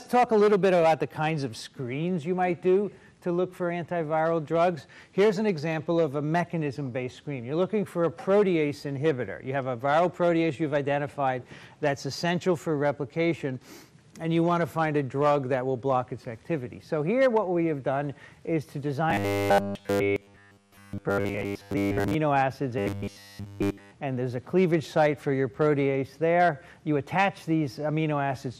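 Throughout the clip, the audio was likely squeezed by MP2 compression at a rate that sounds consistent with about 80 kbps. Too few bits leave upper sub-bands switched off or flickering and the remaining bands coarsely quantised, giving plainly audible dullness and gurgling, granular distortion.

From 19.10 to 22.14 s and again from 22.79 to 23.92 s, new audio arrived too seldom, so playback kept repeating short buffers of about 10 ms, the likely cause of the robotic sound from repeated short buffers. In the first stretch most of the audio is replaced by repeats, and in the second all of it is. The sound becomes a rigid, metallic 100 Hz buzz that only roughly follows the original.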